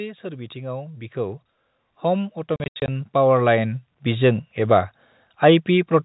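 A speech clip with automatic gain rising twice: from 0.21 to 1.48 s the level swells by about 5 dB, and from 2.0 to 3.87 s by about 8 dB, just before "बिजों एबा", voice and background lifting together as a slow ramp in the waveform envelope. Inside that second rise, packet loss filled with silence chops 2.56 to 2.88 s: about 180 ms vanishes across 320 ms, the longest gap 80 ms, which fits 20 ms packets. These show as hard-edged blank columns on the spectrogram and flat silent stretches in the waveform.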